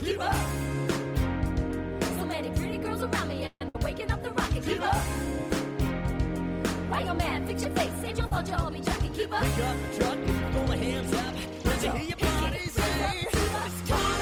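At 3.46 s the sound stalls for about 0.15 s: the last sound carries on as a fading buzz that drops to silence for its final 50 ms, then resumes where it stopped. This is a call audio freeze, likely packets held up until the jitter buffer ran dry. Nothing is lost, but everything after it plays about 141 ms later.

Right after, from 3.69 to 3.75 s, comes a burst of packet loss. The receiver again extends the last sound and turns it down, but when it resumes about 60 ms of audio is gone. It is a skip forward rather than a pause.

At 8.27 s a short concealed packet loss leaves a 40 ms hole, filled by extrapolating the preceding sound and blending back in. It is heard as a brief smear or wobble, too short and smooth to register as a gap like the earlier two.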